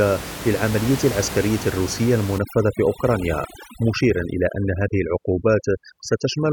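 From 2.38 s to the end of the clip, the gaps between phrases sink to near silence dotted with twinkling specks. This is overdone noise removal. The room noise sits only about 12 dB below the speech, and a noise reducer set far too strong cuts individual frequency bands whenever they come close to its noise estimate, taking the quieter parts of the voice down with the noise.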